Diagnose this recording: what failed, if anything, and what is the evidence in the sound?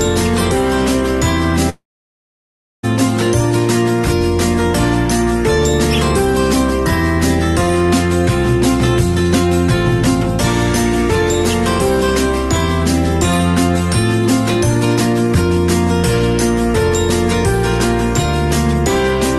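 Long network dropout, 1.69 to 2.85 s: the sound stretches into a fading buzz, then a second of silence, likely lost packets; audio resumes without the missing part.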